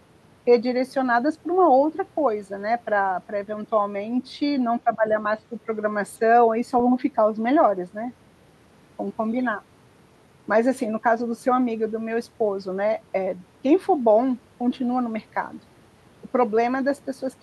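Speech; from 4.84 to 5.15 s it ducks roughly 15 dB, likely speech suppressed in double talk, dipping in level rather than falling silent like a dropout.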